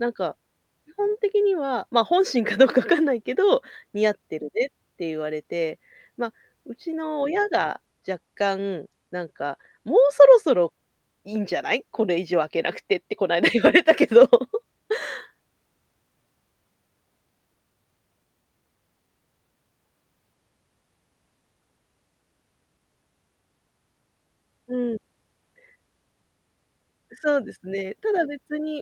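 Nothing stood out as a technical fault anywhere in the speech when listening.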